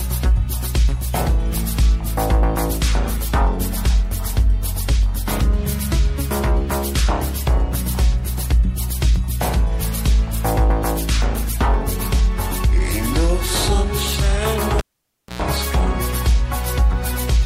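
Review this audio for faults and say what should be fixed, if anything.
A cable pulled and plugged in, from 14.79 to 15.42 s: a pop, about 0.59 s of near silence, roughly 0.11 s of 60 Hz mains buzz while only the tip touches, then a second pop. The waveform shows spikes around a flat gap, with a 60 Hz hum line on the spectrogram. Mute the channel before re-patching, and use locking connectors so the cable can't be disturbed mid-recording.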